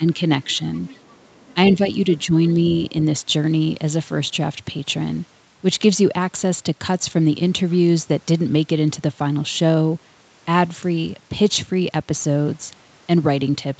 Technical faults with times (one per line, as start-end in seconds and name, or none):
0.00-0.19 speech suppressed in double talk
0.47-0.63 speech suppressed in double talk
0.74-1.54 other side's voice leaking through
1.71-1.81 speech suppressed in double talk
2.48-2.53 other side's voice leaking through